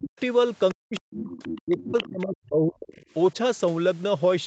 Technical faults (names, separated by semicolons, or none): speech suppressed in double talk; other side's voice leaking through